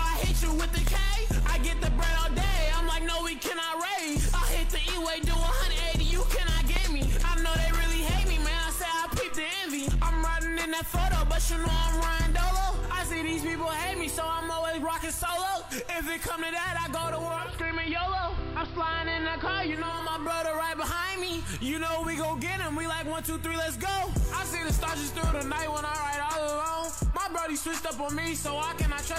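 A voltage step or pulse, likely from a plug, switch or static discharge, twice breaks into the signal path, producing a loud pop from 0.87 to 0.90 s and again from 6.76 to 6.79 s. Each is a single sharp crack lasting about 20 ms and peaking roughly 15 dB above the surrounding sound. The audio continues underneath, so the pops sit on top of it.

From 17.17 to 20.17 s, the receiver loses its digital stream and the digital radio blends to analogue, cross-fading over about 0.48 s into the station's AM broadcast before returning to digital. A hiss floor rises to around 25 dB below the signal, and the level shifts by about 1 dB at the changeover.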